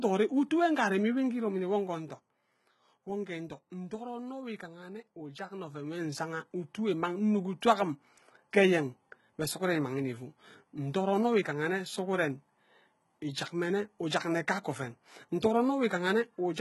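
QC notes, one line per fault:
Throughout, HE-AAC compression: heavy damage; treble ends near 11.8 kHz and sounds copied up from lower bands rather than dulled, likely HE-AAC v2 near 16 kbps.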